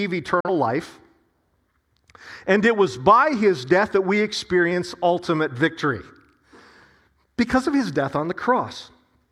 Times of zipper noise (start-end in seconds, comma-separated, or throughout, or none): none